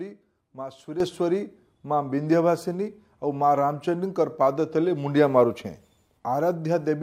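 A sudden gain jump hits the audio at 1.00 s: the digital level steps up by about 10 dB between one sample and the next, with no ramp, most likely from a gain setting or bit shift applied instantly. Because the change is made to the whole signal at once, the sound and its background noise leap up together and stay at the louder level from that point to the end of the clip.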